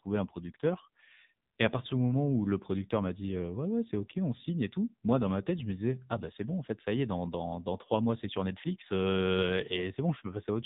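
Throughout, the AMR narrowband mobile codec cuts everything above 4 kHz, a flat ceiling on a spectrogram. Heavy buzzy, synthetic coding fits a low mode near 6.7 kbps.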